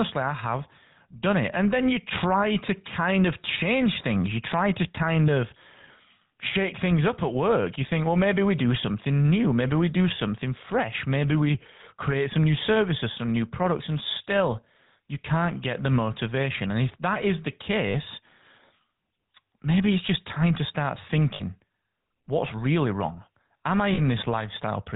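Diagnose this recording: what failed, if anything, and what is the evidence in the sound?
GSM full-rate codec damage throughout: the codec stage's pulse-driven vocal-tract model leaves speech buzzy and gravelly with nothing above 4 kHz, consistent with 13 kbps full rate.

Lost GSM frames in the network stage at 17.88–17.95 s after "if that is the", at 21.34–21.43 s after "just time to start", and at 23.94–24.00 s. Each gap is held as a rough metallic ring while the last good frame repeats.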